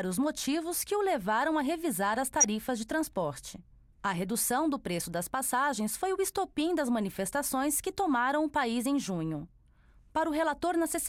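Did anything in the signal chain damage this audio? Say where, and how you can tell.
Yes. At the codec stage, compressed frames arrived with flipped bits and the decoder played them anyway, a corrupt frame decoded. Misread gains and codes sent energy to the wrong frequencies. It shows up as two short glitches, one from 0.72 to 0.79 s, which sounds like roughly three frames' worth, peaking near about -15 dBFS, and one from 2.40 to 2.45 s, about two frames long, louder at around -10 dBFS.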